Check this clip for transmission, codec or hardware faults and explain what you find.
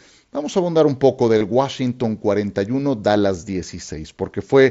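One transmission fault, over a wideband mSBC Bluetooth headset link which adds light graininess on louder sounds. From 1.38 to 1.41 s, just after "a abundar un poco", concealed Bluetooth headset packet loss occurs: roughly 30 ms of packets never arrived, and the phone filled the gap by repeating the closest-matching recent waveform. It comes through as a brief buzzy, steady-level hold with a slight warble as genuine audio resumes.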